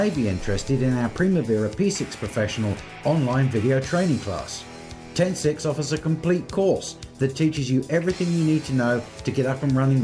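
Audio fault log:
No faults heard anywhere in this recording.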